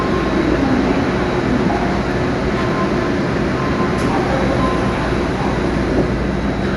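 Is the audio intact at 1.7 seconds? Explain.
No. The sound is dull throughout, with nothing above 11.4 kHz and a rough, fluttering noise around tones, likely Dolby Digital compression at a low bitrate near 64 kbps, where band-narrowing and dither noise fill dropped lines.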